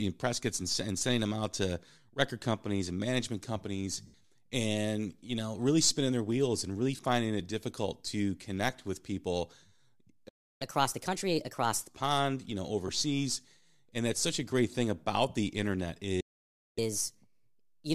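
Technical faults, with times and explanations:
4.06–4.14 s, 6.97–6.99 s and 12.88 s, lost LE Audio frames: Bluetooth LE Audio frames went missing, about 80 ms, 20 ms and 10 ms of them, and the LC3 decoder filled each gap by repeating the last spectrum with scrambled phase. The speech briefly blurs into a noisy smear. The last dropout falls just after "pond you know".
10.28–10.62 s and 16.20–16.79 s, playback stall: The player stopped producing output, likely because its buffer ran dry or its thread was blocked. The speech cuts out mid-flow, for about 0.32 s and then about 0.56 s, the second right after "thing about the internet".
10.62–11.89 s and 16.79 s to the end, catch-up at higher speed: After each stall the player resampled its backlog to play 1.25 times faster to recover the lost time. Speech rushes and rises about four semitones in pitch, the first time leading into "pond you know" and then settling back to normal speed.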